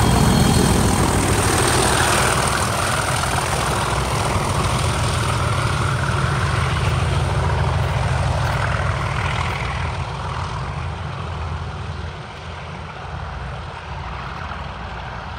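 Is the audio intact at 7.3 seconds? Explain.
Yes, at 7.3 seconds the audio plays through intact, with no dropout, click, distortion or other fault at that moment.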